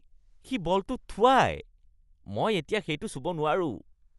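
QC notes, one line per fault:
Throughout: Dolby Digital compression, likely the cause of the dull, rough sound, with a fluttering noise riding on the speech and nothing above about 11.5 kHz. It fits a 64 kbps stream, where bare frequency lines are filled with dither noise. A spectrogram shows a hard ceiling and speckled, grainy harmonics.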